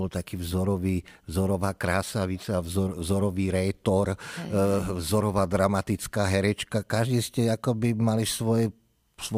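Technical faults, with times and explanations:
No technical faults can be heard in the clip.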